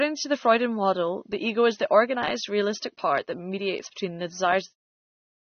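All the way through the speech you can plainly hear AAC compression, likely from a low-bitrate AAC-LC encode around 24 kbps. Nothing survives above 6.3 kHz, so it sounds dull and smeared right up to the fade-out ending at 4.75 s.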